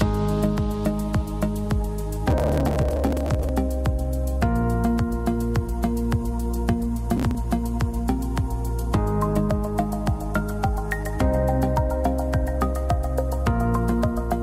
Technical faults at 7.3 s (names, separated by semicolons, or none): processor overload crackle